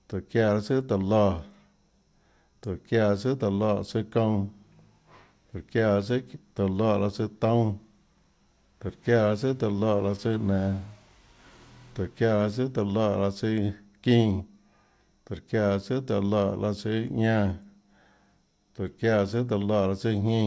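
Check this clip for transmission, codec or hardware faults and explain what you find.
No faults turn up anywhere in this speech recording. There is nothing in it that calls for further explanation.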